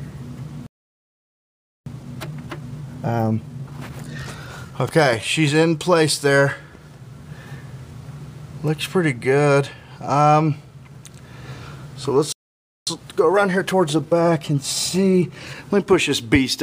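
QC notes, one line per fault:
0.66–1.86 s and 12.32–12.87 s, playback stall. The sound stops in mid-flow and the output goes silent. The first gap lasts about 1.2 s and the second about 0.55 s. Each time the audio resumes after the silence. The likely cause is the player running out of buffered data, or its output thread being blocked, so nothing reached the output until it recovered.
1.86–4.86 s and 12.87–15.87 s, time-compressed catch-up. Right after each stall, the audio runs hurried for 3 s, at about 1.15 times normal speed. Pitch stays normal. The player is working off the backlog built up during the stall. It cuts out small pieces and cross-fades the joins, which shortens the timing without shifting pitch.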